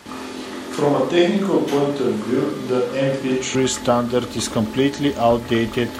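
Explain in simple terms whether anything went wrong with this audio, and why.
A switch to a distant microphone affects the audio from the very start until about 3.55 s. The speech sounds roomy and hollow, with thinner bass and some background noise, though the loudness stays about the same. The likely cause is that the close microphone dropped out, leaving a farther one, until the clearer sound suddenly returns.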